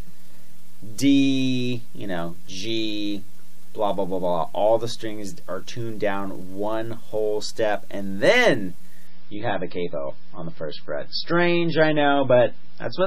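Adaptive stream at a lower bitrate, from 9.07 s to the end: the connection appears to have slowed, so playback switched abruptly, with no gap, to a far leaner encoding. Nothing remains above 5.6 kHz, and the dull, swirly, artefact-laden texture points to roughly 16 kbit/s MP3.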